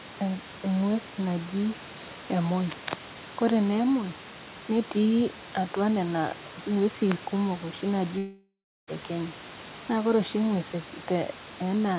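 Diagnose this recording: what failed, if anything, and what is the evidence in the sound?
From 8.18 to 8.89 s the speech decays into a fading buzz, then silence, and resumes with a chunk gone, likely a long network dropout.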